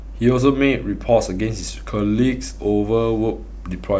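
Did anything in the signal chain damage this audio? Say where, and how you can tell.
Yes. A steady low tone sits under the speech from start to finish, fairly loud and not far below the speech itself. It is mains hum at 50 Hz, with a few low harmonics stacked above it. The damage happened in the analogue wiring, before conversion. A ground loop between connected devices, or a nearby transformer, let the 50 Hz power line leak into the signal path, and that hum was then recorded along with everything else.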